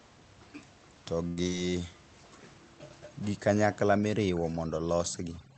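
A short stall from a late packet comes at 1.27 to 1.40 s. The next packet of this speech had not arrived when it was due, so the jitter buffer emptied. The receiver held the last sound for about 93 ms until the packet came in, then resumed from the same point. Nothing is lost, but one sound is drawn out unnaturally long, with a faint buzzy, slightly dipping quality as the receiver's stretched copy wears thin.

A short concealed packet loss follows at 1.43 to 1.48 s. Here about 60 ms of audio never reached the decoder in time. The receiver filled only about 22 ms, extending the preceding sound, then blended into the real audio that came next, while the buffer shed roughly 40 ms of the delay it had just built up. The result is a brief smear or wobble, and a short consonant in that stretch can disappear outright.

Overdone noise removal runs from 3.97 s to the end of the clip. A noise reducer set far too aggressively pushes individual frequency bands down or off whenever they sit near its noise estimate. 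The room noise, about 26 dB below the speech, is gated to near silence with scattered twinkling specks, and quieter parts of the speech are stripped away with it. Above all this sits the call codec's upper limit of about 8 kHz, which points to Opus at a modest bitrate.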